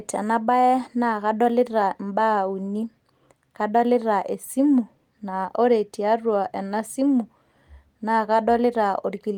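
No technical faults are audible at any point in the speech.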